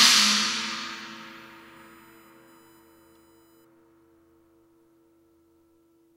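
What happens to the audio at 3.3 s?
A USB whine sits under the audio from 0.55 to 3.65 s: a steady 1 kHz tone from the 1 ms bus frames, strongest at its 15 kHz harmonic, roughly 40 dB down.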